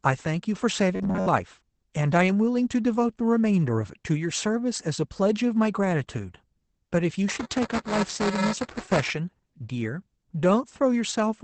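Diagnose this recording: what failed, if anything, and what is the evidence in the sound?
Speech throughout sounds muffled and slightly hoarse, with nothing above about 8 kHz. This is Opus voice compression at 12 kbps, SILK wideband, coding the excitation coarsely.

From 0.96 to 1.30 s the speech becomes a rigid metallic buzz near 94 Hz. This is robotic sound from repeated short buffers, likely a starved driver buffer replaying roughly 11 ms fragments.

From 7.28 to 9.10 s a rattle at 375 Hz rides on the speech. This is buffer tearing: a small slice of each period replays audio from about 7 ms earlier, which fits a 128-sample buffer.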